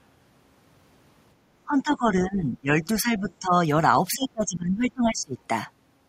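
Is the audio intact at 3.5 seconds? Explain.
No. At 3.5 seconds the audio is inside a stretch of speech suppressed in double talk that runs from about 1.65 to 3.57 s. The speech is pushed down in pieces across roughly a second and a half of that span, sinking at its deepest by around 15 dB. The likely cause is an echo canceller that, with both ends talking at once, could not tell this talker from the returning loudspeaker echo and attenuated both. Unlike a network dropout, which leaves abrupt silent gaps, this is a turning-down of the level.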